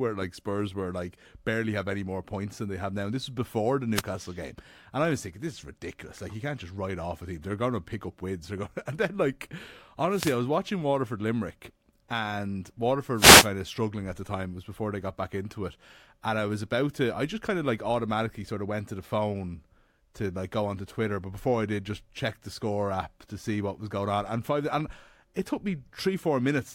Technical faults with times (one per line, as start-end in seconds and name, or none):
3.94-4.03 wireless microphone noise hit
10.08-10.40 wireless microphone noise hit
13.14-13.49 wireless microphone noise hit